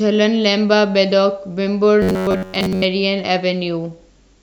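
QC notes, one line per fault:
2.02–2.86 s robotic sound from repeated short buffers: speech turns to a rigid metallic buzz near 94 Hz, likely an 11 ms buffer repeating over skipped audio.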